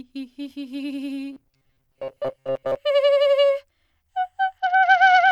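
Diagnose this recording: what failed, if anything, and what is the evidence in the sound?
Robotic sound from repeated short buffers, 1.33 to 2.77 s, driver or buffer stage: a rigid 134 Hz buzz, likely from roughly 7.5 ms chunks replayed while most of the real music is skipped.

Bluetooth SBC bit pool drop, 4.58 s to the end, codec stage: the treble dulls and grit appears, consistent with the bit pool falling from 28 toward 8, about 72 kbps.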